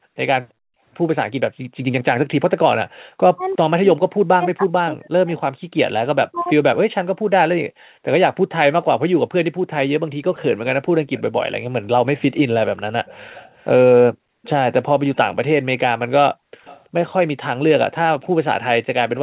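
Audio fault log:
0.0–0.82, 2.88–3.07, 5.63–5.77, 7.69–8.03, 14.11–14.43, 16.35–16.64 s, background gated by the echo canceller: room sound drops about 40 dB while the loudspeaker plays, then returns.
3.35–6.58 s, speech suppressed in double talk: the talker's own voice dips deeply and breaks up for roughly two seconds in total, likely because both sides spoke at once and the canceller ducked everything.
10.35–19.18 s, echo leak: a faint copy of the voice trails the original by about 0.33 s, well below the speech, likely from uncancelled loudspeaker pickup. It adds sound rather than removing it.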